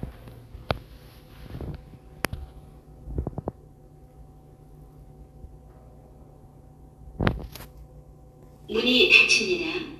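No technical faults are audible anywhere in this sound recording.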